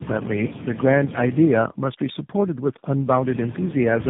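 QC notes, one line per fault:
Throughout, tandem speech coding: rough, muffled, warbly speech with nothing above 3.8 kHz. This fits several narrowband codecs in a row, each re-coding the previous one's damage.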